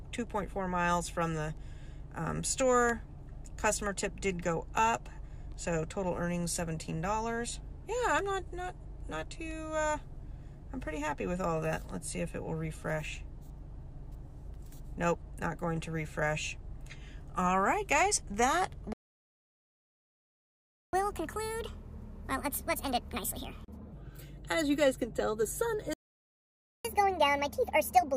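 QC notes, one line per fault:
18.93–20.93 s, playback stall: the sound cuts to silence mid-flow for 2 s, then resumes; likely the player ran out of data or its thread was blocked.
20.93–23.93 s, catch-up at higher speed: sound runs 1.5 times fast and roughly seven semitones sharp, as the player resamples its backlog to recover lost time.
25.93–26.85 s, playback stall: another abrupt dropout, about 0.91 s of silence before the sound carries on; likely a second buffer underrun or blocked playback thread.
26.85–28.16 s, catch-up at higher speed: again 1.5 times speed with pitch raised about seven semitones, the player racing through buffered audio until the clip ends.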